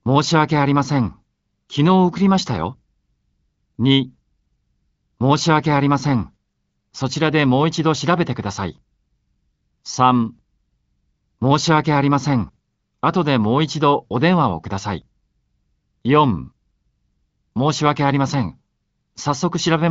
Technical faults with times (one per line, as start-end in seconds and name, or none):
none